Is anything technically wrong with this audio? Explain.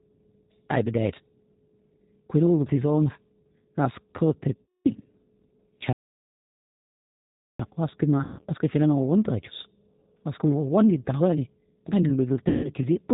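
Yes. This speech clip has three kinds of fault.

Throughout, the speech goes through the G.729 codec (the G.729A variant) at 8 kbit/s, with plainly audible damage. The codec rebuilds each 10 ms frame from a vocal tract filter, a pitch predictor and a few coded pulses, and it discards everything above 4 kHz. The voice sounds rough, slightly synthetic and muffled. On a spectrogram, energy stops at a flat ceiling at 4 kHz across the whole clip.

VoIP packet loss concealed by the speech codec occurs three times: 4.64–4.87 s (about 210 ms of audio lost), 8.23–8.46 s and 12.48–12.70 s (about 150 ms each). The decoder fills each gap by extrapolating from the last pitch and filter state while lowering the gain. Speech turns into a stretched, smeared sound that fades and stays weak briefly afterwards. On a spectrogram, the harmonics appear frozen and then die away. The waveform shows a repetitive, decaying envelope.

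A playback stall runs from 5.93 s to 7.59 s, about 1.7 s of silence in the middle of the speech. The sound then resumes. The likely cause is the player running out of data or being blocked, with no output until it recovered. On the waveform this is a near-flat line. On the spectrogram it is a near-blank vertical band with sharp edges.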